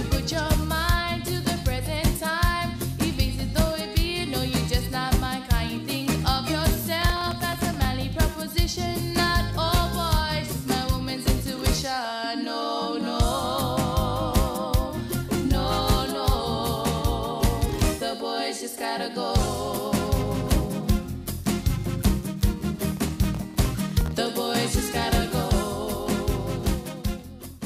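Two bursts of processor overload crackle show up, from 7.02 to 7.88 s and again from 22.89 to 24.11 s. In both, the machine couldn't keep up with its tiny audio buffers, each well under a millisecond. Dozens of deadlines slipped in a row, and every miss dropped out as a sliver of silence with hard edges. You hear a gritty, tearing crackle riding over the sound that clears once the load eases.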